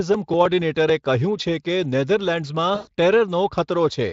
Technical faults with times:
2.75-2.88 VoIP packet loss concealed by the speech codec

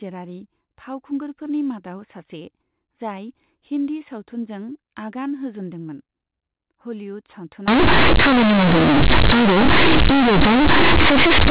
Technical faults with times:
7.68-11.51 companded audio read as linear

